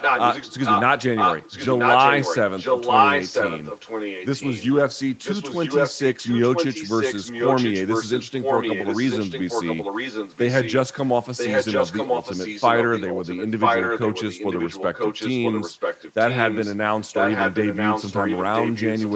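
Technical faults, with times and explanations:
0.00–0.83, 1.15–2.38, 2.56–4.66, 5.23–10.73, 11.37–16.76 and 17.13–19.16 s, echo leak: a second copy of the speech trails the original by about 0.99 s. It is roughly as loud as the direct voice in the first three stretches and the last, and a little quieter from 5.23 to 16.76 s. The likely cause is a far end on loudspeaker whose echo canceller let its microphone's pickup of this voice return down the call.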